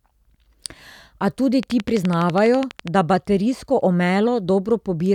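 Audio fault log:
1.63–2.89 s, train of clicks: about fifteen near-identical pops at a regular 12.1 per second, peaking about 10 dB above the speech, ending just before "da baterijsko". It is likely interference or a faulty connection or power supply. A waveform shows evenly spaced spikes, and a spectrogram shows thin full-height vertical lines.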